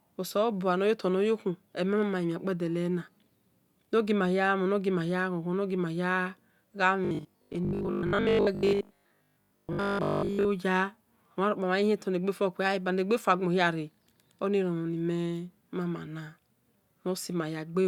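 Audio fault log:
7.05 to 10.47 s, robotic sound from repeated short buffers. The speech turns into a rigid, metallic buzz with a fixed pitch of 50 Hz. It still tracks the rough shape of the words. A 50 Hz pitch fits a 20 ms chunk of audio being replayed over and over. This is likely caused by new audio arriving too slowly, so the last short buffer fills the gap. Around seven tenths of this stretch is repeated material, and the real audio in those gaps is lost.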